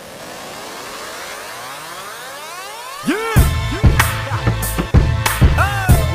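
No technical faults can be heard in this recording, and the signal stays intact throughout.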